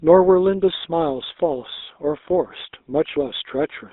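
Speech carried over a GSM full-rate codec for the whole clip, its pulse-driven vocal-tract model leaving a plainly audible buzzy, gravelly roughness, with the band held to about 250 Hz to 3.7 kHz, consistent with the 13 kbps full-rate standard.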